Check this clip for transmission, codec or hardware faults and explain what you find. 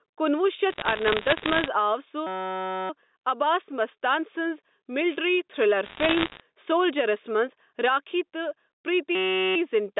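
Three kinds of fault can be heard: gain pumping throughout, two bursts of bit errors on the digital phone line, and two system hang loops.

Gain pumping runs through the whole clip. The level swings by about 5 dB. Loud and quiet passages sit closer together than they should, and the sound feels squashed. The likely cause is a microphone gain set far too high, with a fast limiter or compressor pulling it back down on every loud peak.

Bit errors on a digital phone line appear from 0.70 to 1.68 s and again from 5.84 to 6.40 s. The second burst comes right after "مستان سنٛز ملٹری تھرلر". Flipped bits corrupt single samples on the G.711 line. Hits on the sign or high bits give sharp ticks. Together they form a patch of crackle over the speech. The second burst is slightly denser, with roughly 1.5% of bits in error against roughly 1% in the first.

A system hang loop occurs from 2.27 to 2.90 s, just before "عباس مستان سنٛز ملٹری". 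A second one runs from 9.15 to 9.56 s. The computer or driver stalled while the sound hardware kept replaying its ring buffer. A 5.33 ms fragment repeats exactly, 118 times in the first loop and 76 in the second. At 188 Hz this is heard as a steady buzz, which fits a 256-sample buffer.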